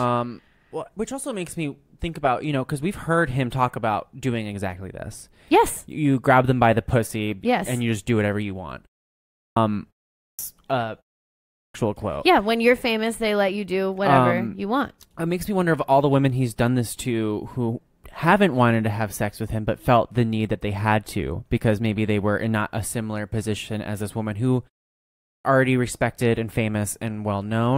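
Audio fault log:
9.35, 10.16, 11.52, 25.24 s: clipped start after a pause. After 0.3 to 0.6 s of silence, the output wakes late and swallows 0.20 to 0.23 s of each onset. The waveform jumps abruptly to full level, and the spectrogram is missing the energy of the opening sounds.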